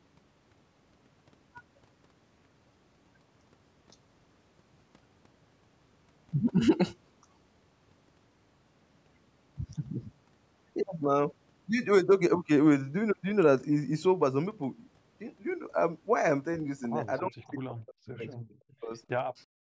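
It's a speech recording, band-limited at 8 kHz by ordinary call microphone processing. From 17.19 to 18.22 s and again from 18.41 to 18.91 s the talker repeatedly dips by around 40 dB and breaks up, most likely speech suppressed in double talk as the echo canceller fought the far end. Then from 19.19 s to the end the room sound drops by about 40 dB, background gated by the echo canceller while loudspeaker audio played.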